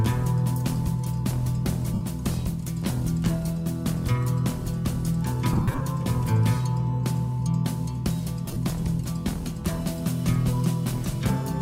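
At 1.94 s there's a short dropout of lost LE Audio frames, about 70 ms, where the decoder papers over the gap by replaying the last spectrum with scrambled signs. It comes out as a brief noisy smear. Around 5.53 to 5.81 s the losses scatter across nearly 0.3 s, with runs up to roughly 50 ms, so the sound turns grainy in patches. At 8.46 to 8.57 s there's a shorter scattered burst, the longest run roughly 30 ms.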